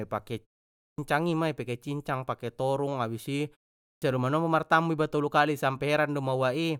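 At 0.83 s and again at 3.87 s, speech resumes with a clipped start after a pause of 0.45 s and 0.39 s. The sleeping output loses about 0.15 s each time, so words begin abruptly without their first sounds. Muted pauses would quieten only the gaps and lose no speech.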